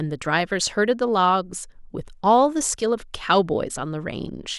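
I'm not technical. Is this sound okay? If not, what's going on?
Yes, nothing stood out as a problem when listening to this recording.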